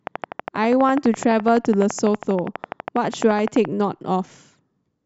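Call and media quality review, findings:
Train of clicks, 0.07 to 3.66 s: regular ticking at 12 per second, roughly 40 clicks, well above the speech level and audible in pauses too. Likely interference from nearby equipment or a faulty connection or power supply injecting near-identical pulses.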